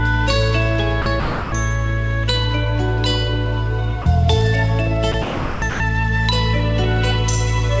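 Six times the sound gives way to steady hiss. This is sound dropped by the voice detector, likely misreading quiet passages as background and stopping, with the receiver playing comfort noise instead. The gaps fall at 1.02 to 1.06 s, 1.20 to 1.52 s, 4.02 to 4.06 s, 5.12 to 5.14 s, 5.22 to 5.62 s and 5.70 to 5.80 s. The 320 and 400 ms gaps sound like flat noise patches. The call path's G.722 coding leaves nothing above 8 kHz.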